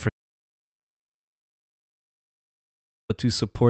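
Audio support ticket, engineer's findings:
Speech cuts to dead silence, no room tone, 0.09 s to 3.10 s, about 2.22 s of audio lost; likely an audio dropout to silence from the input link, silence written.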